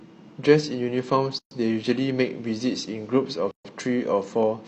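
At 1.39 to 1.51 s and again at 3.51 to 3.65 s, the speech drops into silence for about 124 and 136 ms. Each is a gap at a join of encoded pieces, spaced about 2 s apart. Separately encoded pieces kept their start delay and end padding. The edges are smeared, and the speech resumes where it stopped.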